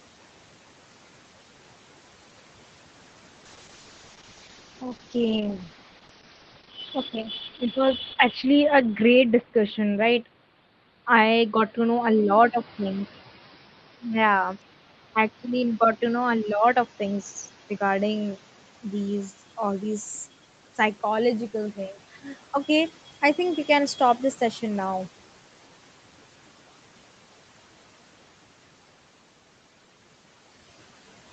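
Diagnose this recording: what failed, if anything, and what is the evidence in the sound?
The network stage failed: the call's bandwidth estimate collapsed from 3.46 s to 20.35 s, just before "psychological thing", forcing the Opus encoder to spend far fewer bits on each frame. The speech turns coarse and watery, and its upper limit falls from 8 kHz to 6 kHz, so it also sounds duller. The worst stretch lasts about 5.1 s, and that roughness fits a fall from 32 kbps to 8 kbps, a call bitrate drop.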